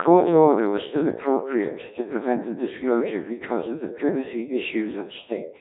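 Throughout the speech, the Codec 2 vocoder rebuilds each voice from sine waves using only pitch, voicing, energy and spectral envelope, so it sounds robotic and buzzy within a 250 Hz to 3.7 kHz band. Unlike narrowband filtering, the waveform itself is lost, which fits roughly 1.3 kbit/s.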